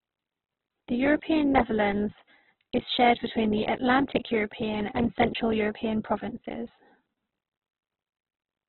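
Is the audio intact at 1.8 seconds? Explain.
No, not really. At 1.8 seconds you're hearing the same damage that runs through the whole clip, likely from Opus compression pushed very hard, in a way that fits a rate around 8 kbps. With so few bits, the encoder fills starved bands with folded or noisy content instead of leaving gaps, so the speech comes out rough and grainy rather than swirly. The bandwidth is cut to narrowband as well, with nothing above about 4.1 kHz, which makes it sound muffled.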